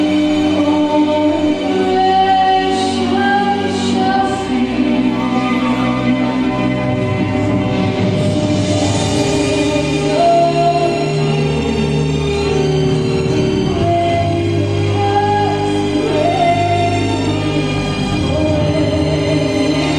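No faults can be heard anywhere in the recording.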